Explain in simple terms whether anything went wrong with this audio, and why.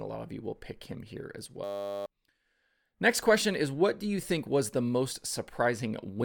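System hang loop at 1.64 to 2.06 s, after "pick him here as": the computer froze and replayed one 10 ms scrap, making a steady 100 Hz buzz.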